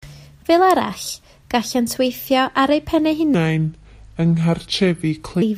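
After "ar eu pen eu", from 3.34 to 5.42 s, a section at the wrong speed plays at 0.75x, likely from a clock mismatch. Pitch drops about five semitones, stretching spectrogram harmonics downward and widening waveform cycles.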